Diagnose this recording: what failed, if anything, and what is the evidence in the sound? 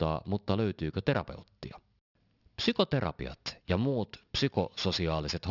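Sibilants across the whole speech clip come out gritty and metallic, with spectral energy running hard up to about 6 kHz. This is aliasing at the sample-rate conversion stage: a downsample, which fits a 12 kHz rate, skipped its anti-alias filter, folding high content back at roughly 15 dB below the signal.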